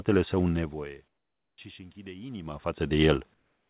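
From 1.08 to 1.58 s the room background drops away and is replaced by a smooth, featureless hiss about 13 dB quieter. This is likely comfort noise in place of the background, inserted by the receiver during a transmission pause. On a spectrogram the textured noise floor turns into a flat, even wash below the 4 kHz band edge, and the waveform shows a sudden step down.

From 1.75 to 2.94 s automatic gain rising lifts voice and background together by about 4 dB. The gain control is compensating for an input that fell by about 24 dB, and the swell is gradual. The waveform envelope widens steadily over that stretch, and the spectrogram brightens evenly across all frequencies.

From 3.34 s to the end, what is likely the same comfort-noise substitution returns. The steady synthetic hiss sits about 6 dB below the real background it replaces, again appearing as a uniform, detail-free band on the spectrogram.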